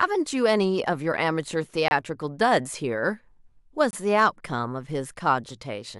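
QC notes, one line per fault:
1.88–1.91 s and 3.91–3.93 s, gap between stream segments: the timestamps of consecutive 2-second segments fail to meet, leaving 28 ms and 23 ms holes that the player fills with silence. The speech cuts out abruptly at each boundary, then resumes with nothing missing.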